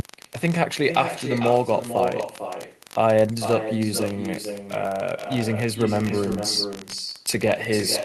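Speech runs through the whole clip with an echo with no canceller: each phrase returns about half a second later, roughly 9 dB quieter and thinner, as the far end's loudspeaker feeds its microphone. Unlike room reverberation, it's a distinct delayed copy, not a smeared tail.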